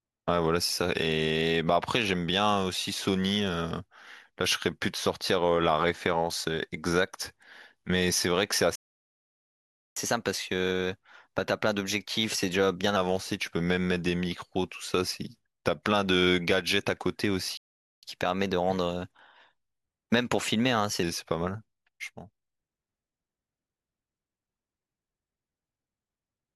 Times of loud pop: none

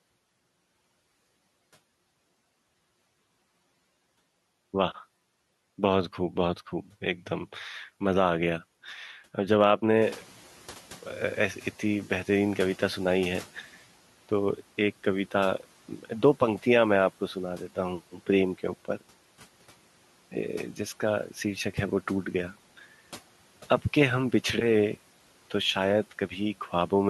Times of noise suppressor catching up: 10.01-13.61

